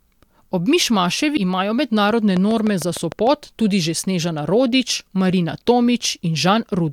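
Compressed frames skipped at 1.36 s, just before "imajo mednarodne": the decoder never played a run of coded frames, either because they were absent from the stream or because it rejected them as corrupt. The speech lurches forward by roughly 150 ms, which points to around ten frames lost. The missing stretch of speech simply isn't there.

A train of clicks runs from 2.37 to 3.28 s, after "imajo mednarodne". About seven near-identical pulses land on top of the speech at a steady 6.64 per second, evenly spaced, peaking around 10 dB above the signal. It is heard as a regular ticking laid over the speech. Its likely cause is an outside source injecting pulses, such as interference from nearby equipment or a faulty connection or power supply.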